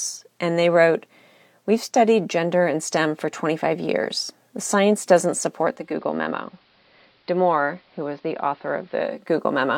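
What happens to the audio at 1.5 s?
Nothing goes wrong at 1.5 s: the speech there plays through intact, with no dropout, click or distortion.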